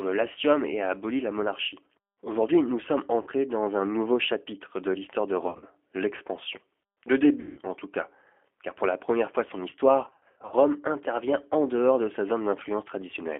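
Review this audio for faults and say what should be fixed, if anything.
G.729 codec throughout: the 8 kbit/s model-based coding sounds rough and synthetic, and a spectrogram shows energy confined to about 250 Hz–3.4 kHz.

VoIP packet loss concealed by the speech codec: at 3.22–3.29 s (after "nous sommes"), 5.48–5.65 s (after "chapitre de l'histoire de"), 7.40–7.61 s (before "en tout cas car") and 10.06–10.54 s. The decoder extrapolates a buzzy tone or coloured noise that fades, seen as smeared harmonics and decaying waveform envelopes.

Prevent this with a wideband codec, jitter buffering and forward error correction on a less lossy network path.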